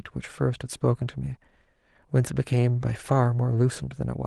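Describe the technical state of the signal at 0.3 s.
At 0.3 s the speech is intact, with no fault at that moment, and the Opus voice compression running there leaves only light coding traces.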